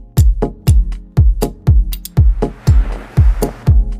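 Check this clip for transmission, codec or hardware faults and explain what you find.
Nothing stood out on listening to the clip.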